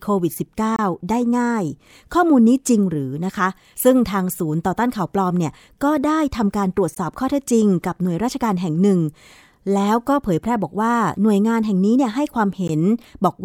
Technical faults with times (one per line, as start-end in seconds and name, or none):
0.76-0.79 gap at a join of encoded pieces
6.95 gap at a join of encoded pieces
12.68 gap at a join of encoded pieces